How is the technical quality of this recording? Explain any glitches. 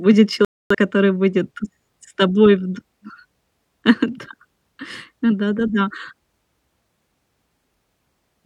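One real glitch in the speech: a digital broadcast dropout from about 0.45 to 0.75 s, just before "который будет с тобой". The receiver lost good frames and muted, so a quarter-second of programme simply vanishes, which fits roughly six dropped frames.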